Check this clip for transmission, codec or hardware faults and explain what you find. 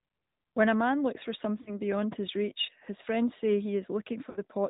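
The clip has two faults: codec damage throughout and two short dropouts.

The AMR narrowband mobile codec is plainly audible throughout. Nothing above 4 kHz survives. The speech sounds buzzy and synthetic because the decoder rebuilds it from a vocal tract model driven by sparse pulses. The amount of damage fits a 10.2 kbps mode.

Lost AMR speech frames cause breaks from 1.62 to 1.76 s and from 4.30 to 4.40 s. The decoder covered the corrupted frames by repeating the last good pitch and tract settings at falling gain. Each time the speech smears and dips briefly. The first break fits two lost frames and the second fits three.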